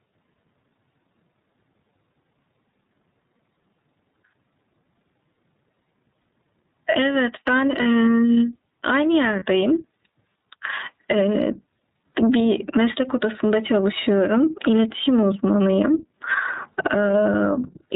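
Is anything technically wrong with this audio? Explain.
Yes. The speech has three problems.

Gain pumping runs through the whole clip. The background swells by around 20 dB in pauses and ducks under each loud syllable, likely from input gain set far too high with a fast limiter clamping it. On a waveform the envelope looks flattened, with the noise floor rising between phrases.

The iLBC codec is audible throughout. Nothing passes above 4 kHz, and the speech sounds slightly rough and synthetic. A spectrogram shows a hard ceiling at 4 kHz. The grainy texture fits iLBC's 13.33 kbps mode with 30 ms frames.

Lost iLBC frames occur at 6.22 s, 7.82–7.86 s, 9.39–9.43 s, 12.13–12.15 s and 16.74–16.77 s. Each dropout fits a single missing 30 ms frame. The decoder fills each gap by repeating the last pitch cycle mixed with noise, so you hear a short buzzy, held vowel before the speech snaps back. 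On a spectrogram each gap shows smeared, repeated harmonics.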